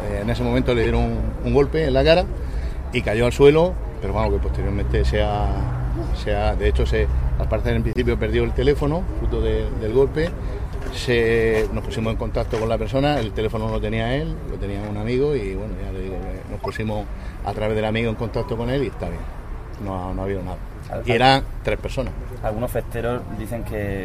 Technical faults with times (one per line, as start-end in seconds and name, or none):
0.83-0.86 corrupt frame decoded
4.23 corrupt frame decoded
6.86 corrupt frame decoded
7.92-8.01 corrupt frame muted
16.60-16.70 corrupt frame decoded